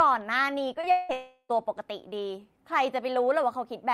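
Short concealed packet loss at 0.73 to 0.77 s and 0.81 to 0.85 s: about 20 ms went missing each time, and the receiver bridged each gap by extending the preceding sound, leaving a quick smear. Long network dropout at 0.91 to 1.11 s and 1.13 to 1.51 s: the sound turns into a fading synthetic continuation for about 180 ms, then about 360 ms, with the second ending in roughly 70 ms of silence, likely because the packets never arrived.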